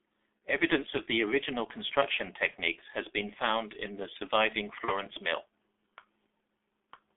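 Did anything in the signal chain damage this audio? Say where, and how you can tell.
Yes. G.723.1 codec damage runs throughout this speech: the band is confined to roughly 300 Hz to 3.5 kHz, and at 6.3 kbit/s the slow, 30 ms-frame voice model leaves the sound muffled and hoarse, with consonants smeared. This is heavy damage at the codec stage.

VoIP packet loss concealed by the speech codec appears at 0.38, 2.51 and 4.85 s. Each gap is one lost 30 ms frame, which the decoder fills by extending its last pitch and filter into a brief, fading stretch, lasting to 0.41, 2.56 and 4.94 s. This is a network-stage fault.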